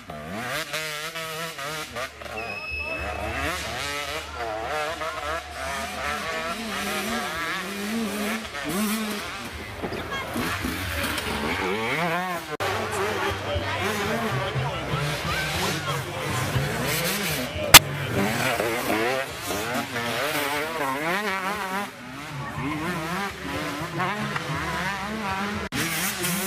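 At 6.32, 9.93, 17.74 and 24.21 s, a corrupt frame is decoded. Damaged compressed data plays back with energy at the wrong frequencies. Each is a brief squeak or noise burst. The 17.74 s one spans several frames and its error peaks about 20 dB above the others.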